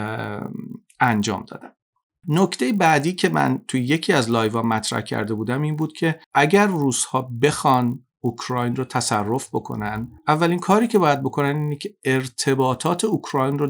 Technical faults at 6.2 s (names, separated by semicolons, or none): resampler restarted on every block